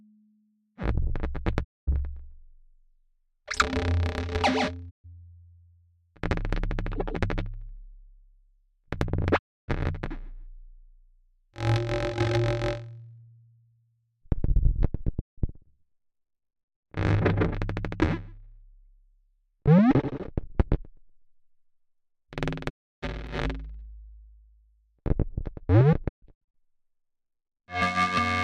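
Six digital broadcast dropouts break up this recording of sounds. The audio fades to silence over about 20 ms and comes back later. Gaps fall at 1.63 to 1.89 s, 4.89 to 5.06 s, 9.37 to 9.70 s, 15.20 to 15.40 s and 22.68 to 23.04 s. They last 128 to 320 ms. The receiver lost good frames and muted until clean ones returned. The losses fit 32 ms frames. At 26.07 to 26.56 s the hole is broken into several short gaps, with no single run longer than 128 ms. At 23.27 s there is a tiny jump in the sound. It is likely a dropped buffer (overrun). A very short piece, under 2 ms, went missing, and the two sides were joined with no silence between them.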